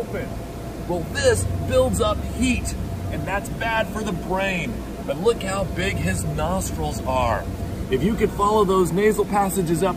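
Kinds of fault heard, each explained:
Low bit depth without dither: grainy distortion follows the sound throughout, roughly 30 dB down. It is likely undithered rounding to about 7 bits.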